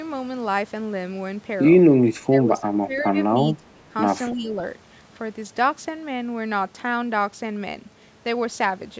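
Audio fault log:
2.29–3.18 s, 3.57–3.92 s, 4.32–4.59 s: speech suppressed in double talk. The speech dips by about 20 dB, then only slightly in the last stretch, likely because the echo canceller ducked it while the far side spoke.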